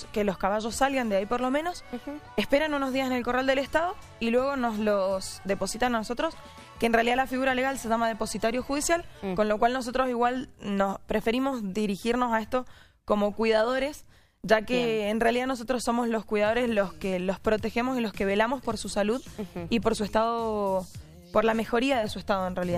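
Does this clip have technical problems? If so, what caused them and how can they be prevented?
No technical problems are audible.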